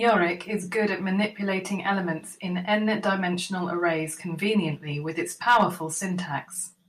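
A stage in this speech clip's chain was driven about 2 dB past its limit from 0.08 to 0.11 s and about 4 dB past it from 5.48 to 5.63 s. The result is hard clipping: flattened peaks whose added high harmonics come through as brief crackle.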